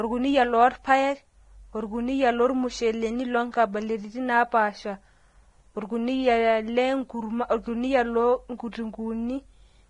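Throughout, the speech sounds hissy and grainy with smeared onsets, likely from heavy Vorbis compression at a low bitrate near 29 kbps; spectrograms show noisy treble ending sharply at 10.6 kHz.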